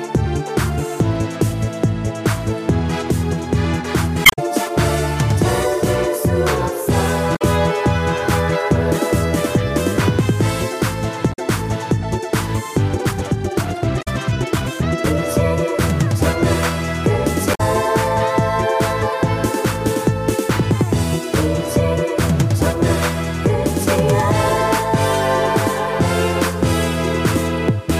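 Corrupted bytes in the compressed stream first show up at 4.22 s. The decoder misreads the damaged frames, loses sync and hunts for the next valid frame header, which produces a short glitch lasting about 0.17 s. The same damaged data in a compressed stream recurs at 7.32 s, 11.29 s, 13.98 s and 17.51 s, each a blip of roughly a tenth of a second.

From 12.86 s to 15.19 s, the sound runs about 1.66 times faster while its pitch stays put. This is likely a time-stretched section, where software squeezed the audio to fit a shorter length by dropping short pieces, so the passage sounds rushed. The 13.98 s glitch falls inside this hurried stretch, and normal pace resumes abruptly at 15.19 s.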